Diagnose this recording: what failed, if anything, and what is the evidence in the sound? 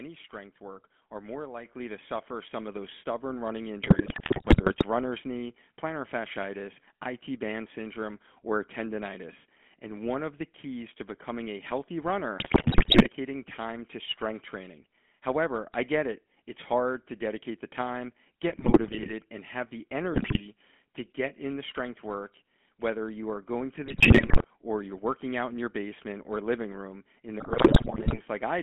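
The codec stage is the GSM full-rate codec, audible for the whole clip. The speech has the gravelly, buzzy grain of a coder that rebuilds the voice from a vocal-tract filter excited by a sparse pulse train, which fits a 13 kbps full-rate stream. On a spectrogram the energy sits in a telephone band of 200 Hz to 3.4 kHz, with nothing above it. Harmonics look smeared and grainy, not cleanly striated.

The microphone volume was stepped up in call processing, where automatic input gain raised the device level. At 1.65 s, between "strength work are more" and "to suffer some of", voice and background jump together by about 7 dB. A smaller step of about 1 dB follows at 3.30 s, just after "suffer some of those". On the waveform the envelope steps up abruptly mid-phrase and stays higher. The noise floor between syllables rises by the same amount, which shows a gain change and not louder speaking.

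GSM bit errors come from the network and radio link. They are heard as squawks, pops and gargling at 3.82–4.83 s, 12.38–13.10 s, 18.50–19.12 s, 20.14–20.46 s (between "and have the" and "to get in the"), 23.86–24.45 s and 27.40–28.19 s. Corrupted filter, pitch and gain parameters distort each affected 20 ms frame. On a spectrogram this shows as blocky, frame-aligned smears and bursts. The 12.38 s burst has the heaviest error rate, about 10%.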